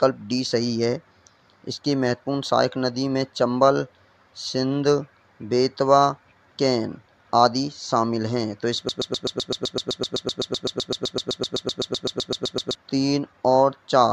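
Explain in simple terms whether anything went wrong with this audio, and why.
From 8.89 to 12.75 seconds, a broken-record loop repeats one 127 ms snippet about 30 times. Playback likely stalled. The real audio there is lost.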